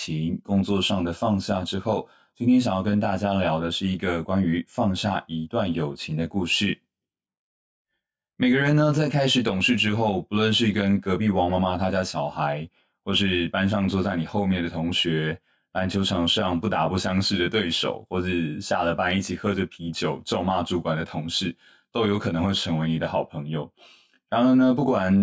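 From start to end, the speech carries channel delay (comb filtering). One channel runs roughly 20 ms behind the other, and the two are summed to mono. Shared sound cancels at evenly spaced notches, starting near 30 Hz. The result sounds rough and slightly doubled.

Gain pumping also runs throughout. The gain swings by about 5 dB. The likely cause is input gain set far too high, with a fast limiter clamping every peak. Levels sound squashed.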